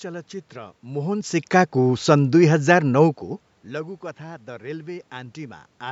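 A speech clip, and nothing is technically wrong with it.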